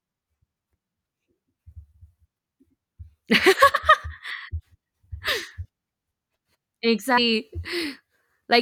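At 3.73 s, 5.27 s and 7.17 s, compressed frames are skipped. Whole 24 ms frames never play, so speech jumps ahead. The first two drop about a tenth of a second, the last about three times that.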